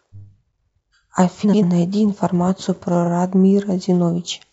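A garbled flutter breaks into the speech from 1.43 to 1.63 s, and a shorter stutter follows at 3.04 to 3.08 s. Both are frames out of order: two adjacent blocks were swapped before decoding, so each stretch plays its halves reversed. The first swaps two 93 ms blocks, which fits runs of four frames; the second swaps two 23 ms blocks, about one frame each. Nothing is lost, only reordered.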